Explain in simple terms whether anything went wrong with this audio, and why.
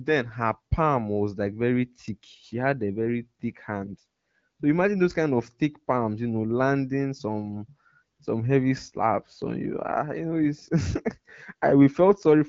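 Nothing went wrong; the speech sounds as expected.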